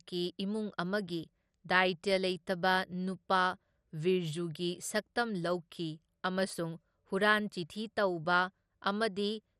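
A speech clip with coarse codec damage throughout. The top end stops at about 14.4 kHz. The rest sounds dull and granular, with a gurgling edge. This is likely MP2 compression, which fits a low bitrate near 64 kbps, with upper sub-bands starved of bits.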